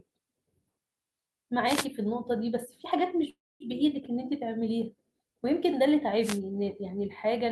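A wireless microphone noise hit lands at 1.65 to 1.87 s, and a second one at 6.21 to 6.40 s. Each is a brief swish of static over the speech. The radio link from an analogue FM microphone faded as reflected signals cancelled the direct one, so the receiver's own noise rose for about a fifth of a second before the signal recovered.

A call audio freeze runs from 3.29 to 3.62 s. The last sound is drawn out as a fading buzz or hiss, then drops to silence for about 220 ms, about 0.31 s of filler in all. The speech then resumes where it stopped, with nothing lost but everything after shifted later. This likely comes from delayed packets leaving the jitter buffer empty until they arrived.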